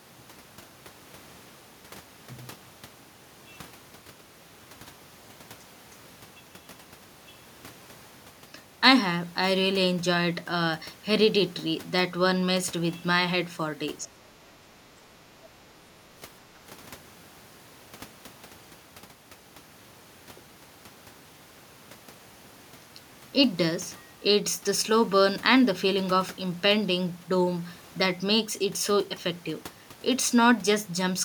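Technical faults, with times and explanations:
14.05–14.21 s and 14.69–14.73 s, speech suppressed in double talk: the echo canceller likely mistook the near talker for loudspeaker echo while the far side was also speaking, and pulled its gain down. The speech dips sharply, by about 20 dB over roughly 150 ms in the first event, then again briefly by about 10 dB for around 40 ms, before it recovers.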